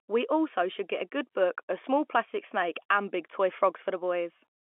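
No faults are audible in the speech; the telephone coding works as expected, with its band limited to about 250 Hz to 3.4 kHz.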